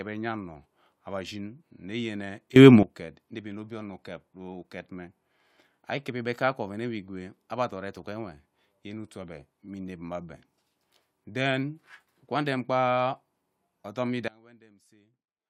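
At 2.56 s the speech and its background noise leap up together by about 18 dB, dropping back at 2.83 s just before "uket inevi mme obie". At 14.28 s both fall by about 24 dB until the end. Both are sudden gain jumps, likely from unramped gain steps.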